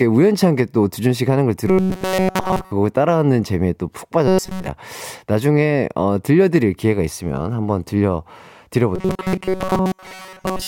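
Speech with robotic sound from repeated short buffers at 1.68–2.71 s, 4.28–4.67 s and 8.95 s to the end: a fixed 188 Hz metallic buzz, likely from a roughly 5 ms buffer replayed, unlike smooth pitch-shifting.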